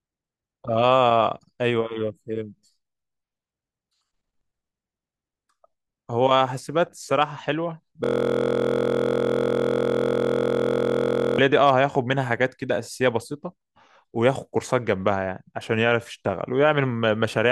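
From 8.04 s to 11.38 s the speech gives way to a system hang loop. The computer or audio driver stopped supplying new data, so the hardware kept replaying the same 23.22 ms stretch of its ring buffer, which fits a 1024-sample buffer, about 144 times. Because the loop is so short, it is heard as a steady buzz at 43.1 Hz. Unlike mains hum, this buzz replaces the speech entirely and carries the frozen fragment's timbre.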